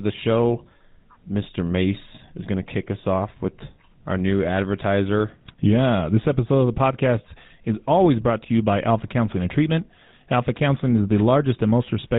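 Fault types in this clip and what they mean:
GSM full-rate codec, throughout the clip: the speech sounds as though it has passed through the original GSM phone codec, which fits a 13 kbps full-rate stream. That codec models the vocal tract as a filter and drives it with a sparse, regularly spaced pulse excitation, keeping only one excitation sample in three. The result is a plainly audible buzzy, gravelly roughness on the speech, and nothing survives above 4 kHz, leaving it dull and band-limited.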